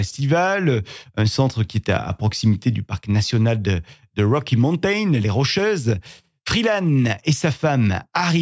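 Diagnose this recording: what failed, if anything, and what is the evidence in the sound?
Nothing here points to a failure at any stage of the chain; the speech comes across steady, with nothing in the sound that needs a diagnosis.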